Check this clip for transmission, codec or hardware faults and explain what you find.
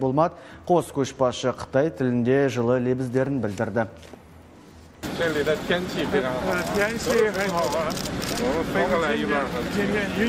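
Nothing stood out on listening that would point to a problem anywhere in the transmission path, the codec or the recording hardware.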